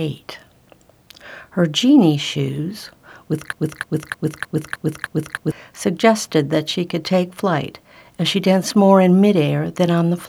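From 3.53 s to 5.52 s, a 0.31 s fragment of the audio repeats six times back to back, stuttering like a broken-record loop. The player, encoder or stream likely stalled and kept resending its last held piece, so the intended audio there is lost.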